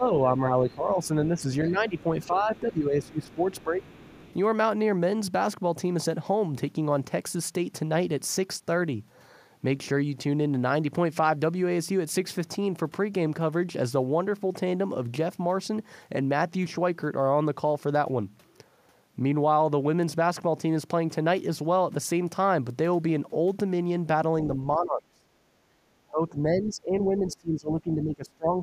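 Right at the start, 0.00 to 0.06 s and then 0.48 to 3.85 s, the talker's speech dips by around 10 dB, roughly two seconds' worth in patches. That's speech suppressed in double talk, likely the echo canceller ducking everything when both ends spoke at once.

Overlapping that, from 1.68 to 2.60 s and 3.02 to 4.34 s, there's the other side's voice leaking through, faint at around 30 dB and then 25 dB below the talker. Likely the canceller didn't fully strip the loudspeaker playback out of the mic.

Later, 24.47 to 25.27 s, the speech drops hard, about 30 dB, for about half a second. Then from 25.55 to 25.83 s the room sound itself dips by about 8 dB, which is the background gated by the echo canceller while the loudspeaker played. From 26.11 s to the end, the double-talk suppression returns at about 20 dB, covering a couple of seconds in stretches.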